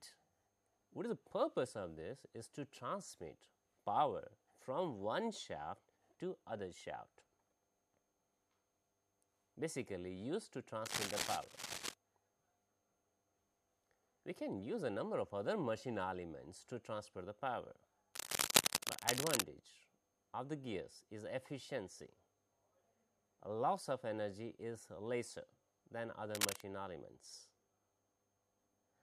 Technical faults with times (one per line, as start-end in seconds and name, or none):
10.84-11.94 cable scratch noise
18.14-19.44 cable scratch noise
26.33-26.62 cable scratch noise